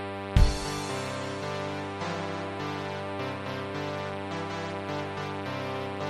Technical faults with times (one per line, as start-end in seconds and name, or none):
none